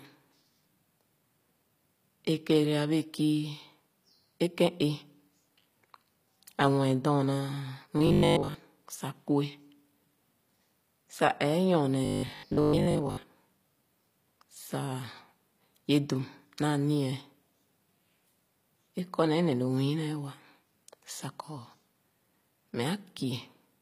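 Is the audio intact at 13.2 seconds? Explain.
No. From 12.05 to 13.29 s, new audio likely arrived too seldom and the last 20 ms was looped, giving a robotic sound from repeated short buffers: most of the voice is replaced by a rigid 50 Hz metallic buzz. Throughout the clip, HE-AAC compression likely rebuilt the treble from copied lower bands, leaving s sounds audibly gritty and lispy.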